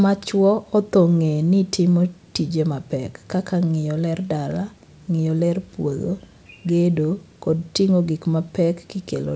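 No technical faults can be heard anywhere in the recording. The speech comes through a WebRTC call path working as intended, with nothing above 8 kHz, a band limit that fits a wideband codec such as G.722.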